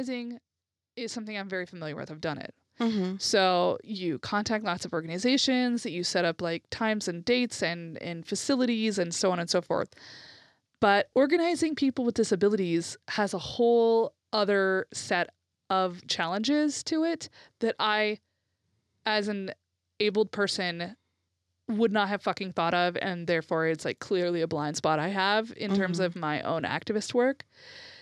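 From 0.95 s to 8.36 s, automatic gain rising lifts the level by about 11 dB. The speech and background noise swell together as the control chases a quiet input.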